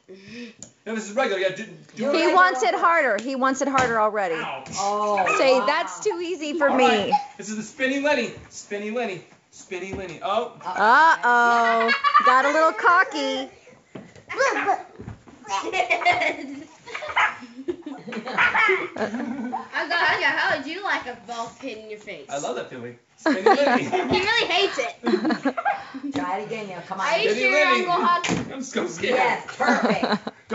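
No faults can be heard anywhere in this recording.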